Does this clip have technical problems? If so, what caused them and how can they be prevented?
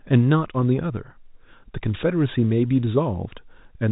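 No, nothing here needs fixing: the speech comes over as ordinary telephone audio, with the narrow G.711 A-law sound that stops around 3.8 kHz, and there's nothing to guard against.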